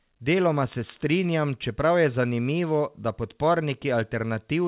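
No faults to report; the speech sits within a band that stops at 4 kHz, consistent with a narrowband telephone codec on a call path.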